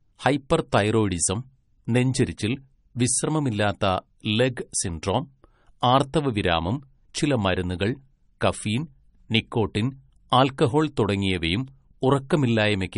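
All the way through, the speech is dull above 10.6 kHz with layered swirly artefacts, most likely transcoding between lossy codecs, consistent with a low-rate MP3 re-encoded to AAC.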